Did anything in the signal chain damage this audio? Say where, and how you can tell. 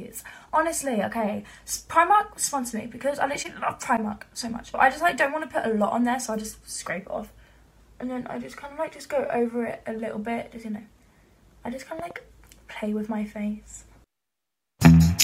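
Yes. At 11.99 s a loud pop breaks in: two sharp transients in quick succession, finishing by about 12.13 s and peaking a little above the programme level. The sound carries on unbroken beneath them, so nothing was lost or dropped; something was added. That points to the analogue wiring stage, with a likely cause of a connector being disturbed, a switch operating, or a static discharge putting a brief voltage step onto the line, which the following circuitry shaped into a pop.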